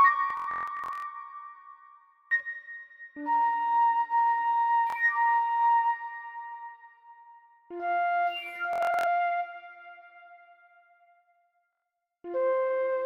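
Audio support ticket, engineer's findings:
Bluetooth stutter at 0.30–1.06 s, 4.90–4.96 s, 8.73–9.07 s, 11.73–11.84 s. Receiver-side link dropouts: late or lost packets, last buffer replayed until data resumes, which fits roughly 23 ms frames. Worst at 0.30 s: about 0.51 s missing across 0.74 s, longest run 0.14 s. Waveform shows identical short slices tiled; spectrogram shows vertical striping at the repeat rate, then a content jump on resume.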